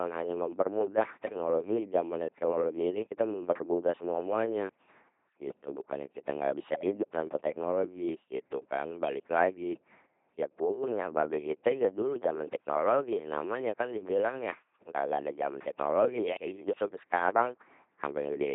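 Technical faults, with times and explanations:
Throughout: LPC-10 vocoder. Buzzy, robotic speech with nothing above 3.8 kHz, rebuilt from pulse-or-noise excitation at what sounds like 2.4 kbit/s. The hard voiced/unvoiced switching sets it apart from ordinary low-bitrate smearing.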